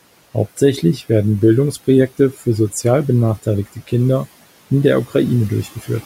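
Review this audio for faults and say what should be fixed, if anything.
Speech cut by the noise suppressor appears twice, from 3.66 to 3.91 s and from 5.64 to 5.89 s, with drops of about 12 dB and about 10 dB. In each window roughly a tenth of a second of speech is pulled down as if it were background, so those portions sound swallowed and faint against room noise sitting about 21 dB below the speech. Relaxing the suppressor's attenuation depth or its speech-detection threshold would keep low-level speech intact.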